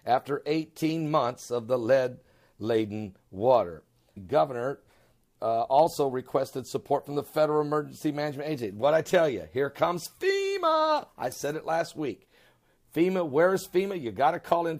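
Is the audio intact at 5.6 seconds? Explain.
Yes, the audio at 5.6 seconds is intact, with no dropout, click, distortion or other fault at that moment.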